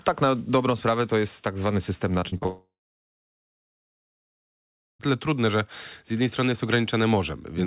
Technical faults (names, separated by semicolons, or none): repeated packet loss (robotic sound); long network dropout